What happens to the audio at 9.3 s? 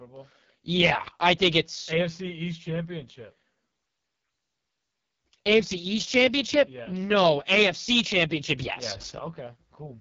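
At 9.3 s the audio is inside a sudden gain jump that begins at 9.19 s and lasts to the end of the clip. The whole signal, speech and background noise together, drops by about 14 dB in a single step, likely from a level setting or bit shift applied with no ramp. On a waveform the envelope shrinks abruptly at 9.19 s and stays small. A spectrogram shows every band dimming at once along one vertical edge.

That quieter stretch also carries the AMR wideband (HD Voice) codec damage present throughout. Speech is heavily roughened and raspy, the sound of the codec's lowest rates, which fits the 6.6 kbit/s mode. There its pulse-driven model of the vocal tract has too few bits to follow the voice closely. A spectrogram shows nothing above about 7.4 kHz, blurred harmonics, and a noise-like fill in the top band instead of real detail.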